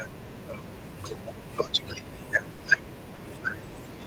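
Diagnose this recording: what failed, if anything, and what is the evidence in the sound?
Network stage: a burst of packet loss from 2.51 to 2.62 s. About 80 ms of speech never arrived in time, so the receiver stretched the last sound into a held, fading sound, then jumped ahead with that stretch missing. A spectrogram shows a frozen, decaying pattern ending in an abrupt restart.

Network stage again: short concealed packet loss from 3.15 to 3.22 s. Roughly 40 ms went missing and was filled by extrapolating the preceding sound, then cross-faded back into the real audio, heard as a brief smear. On a waveform it looks unnaturally smooth; on a spectrogram, a short blurred patch.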